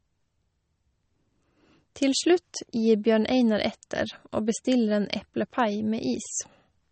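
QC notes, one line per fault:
Throughout, MP3 compression: the speech has nothing above about 8.4 kHz, and weak frequency components drop in and out between frames, giving a watery, swirling texture with chirpy sibilants, which fits a bitrate around 32 kbps. That frame-to-frame shimmer, not simply dull treble, marks it as likely codec damage rather than a plain low-pass filter.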